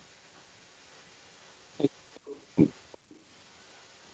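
Echo leak runs through this speech clip from 0 to 4.1 s: a very faint copy of the speech trails about 0.37 s behind it. The likely cause is a far-end loudspeaker whose echo canceller let part of the microphone pickup return down the call.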